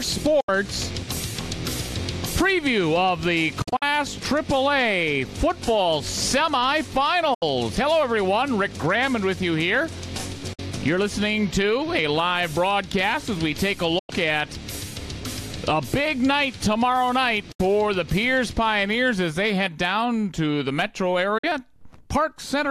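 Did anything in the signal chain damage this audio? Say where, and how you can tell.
Yes. The sound drops to silence in brief holes at 0.40, 7.34, 10.53, 13.99, 17.51 and 21.38 s, each 48 to 96 ms long. Between 3.62 and 3.83 s several short gaps cluster together. Every hole fades out and back in over about 8 ms. This is a digital broadcast dropout at the reception stage: the receiver muted while it waited for valid frames, and whatever was sent meanwhile is gone. The 24 ms steps in the gap lengths fit whole lost frames.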